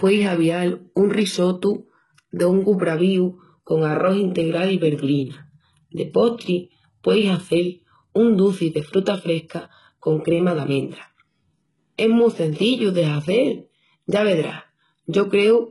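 A speech recording carries heavy HE-AAC compression damage from start to finish, consistent with a very low bitrate around 12 kbps. The upper band is likely rebuilt by spectral band replication, so s sounds come out gritty and lispy, with a metallic sheen whose harmonics don't align with the lower spectrum. On a spectrogram the treble looks like smeared, repeated copies of the lower bands, and everything stops abruptly at 11.5 kHz.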